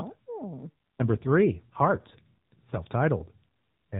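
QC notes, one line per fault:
0.54–2.78 s, AMR rate drop: the speech turns rougher and buzzier for a bit over two seconds, then recovers. The bandwidth doesn't narrow and nothing drops out, so this isn't a gap. It's the mobile codec briefly running at a lower mode, which fits a step down from about 12.2 to 5.9 kbps. The network shifts bits into error protection on a weak link, leaving fewer pulses to model the voice, hence the synthetic edge over the AMR-NB phone-band sound.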